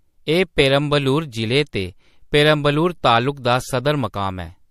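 Pre-echo at 3.35 to 3.37 s: the codec's transform block spreads quantisation noise about 10 dB ahead of a sharp attack, giving a brief hiss and softened onset.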